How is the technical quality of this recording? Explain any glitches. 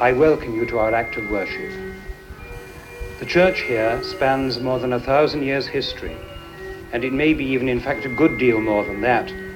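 Two faults stand out, and they overlap.

From 2.52 to 4.59 s a hard, raspy buzz sits steadily under the sound, about 28 dB below it, pitched at 217 Hz with many harmonics. That is GSM phone buzz: a nearby 2G phone in a call transmits in bursts 217 times a second, and the audio circuit rectifies those radio pulses into an audible tone.

At 4.02 s, while the buzz is still present, the audio lurches forward by about 50 ms. That is compressed frames skipped: whole coded frames were missing or rejected by the decoder, so playback jumped ahead.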